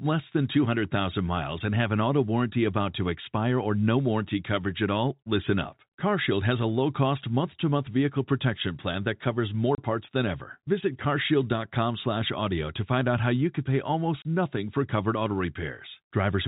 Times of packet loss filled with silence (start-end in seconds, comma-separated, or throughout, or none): 9.75-9.78, 14.22-14.25